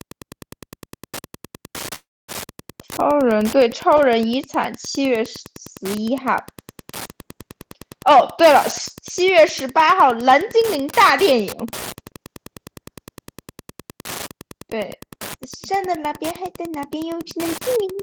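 Throughout this speech recording a steady ticking about ten times a second sits roughly 20 dB below the speech. That is Wi-Fi interference: a nearby radio's beacon, repeating every 102.4 ms, is being picked up and rectified by the audio circuit, so each transmission becomes an audible click. At 1.95 s the sound hangs, the last fragment smeared into a fading buzz or hiss and then about 250 ms of silence. Speech resumes at 2.31 s exactly where it stopped, with nothing skipped. The likely cause is a call audio freeze: packets stalled in transit, the jitter buffer ran dry, and the receiver filled 328 ms on its own before continuing, which leaves everything after it 328 ms later than before. Three later passages sound rushed while keeping their normal pitch. From 8.09 to 8.56 s the speech runs at 113% of normal speed, removing around 70 ms. From 10.62 to 12.11 s it runs at 106%, and from 16.54 to 18.03 s at 107%, each trimming roughly 100 ms. 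These are jitter buffer speed-ups. The buffer had built up more delay than its target, so the receiver repeatedly cut out short slices of one or a few pitch periods to catch up. That compresses timing without shifting pitch and gives the speech its hurried, clipped rhythm in those stretches.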